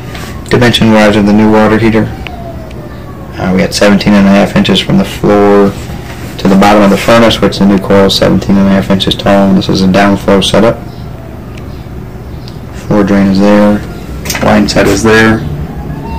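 Hard clipping runs throughout: driven about 21 dB past full scale, roughly 15% of samples hit the rails, flattening waveform peaks, smearing harmonics upward on the spectrogram, and adding harsh fuzz to loud sounds.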